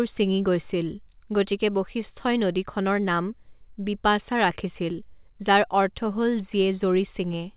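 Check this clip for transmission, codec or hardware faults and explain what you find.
No transmission, codec or hardware faults are audible in the speech; the call path's hard band limit, with nothing above 4 kHz, fits a narrowband telephone codec such as G.711 A-law at 64 kbps and is expected for that path rather than a defect.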